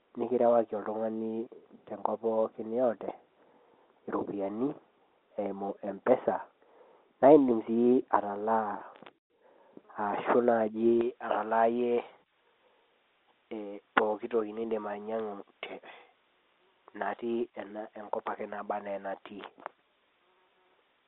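De-emphasis applied wrongly, from 0.0 to 11.01 s: a redundant treble cut slopes the response down by about 11 dB at 10 kHz, muffling the speech over the telephone-band coding.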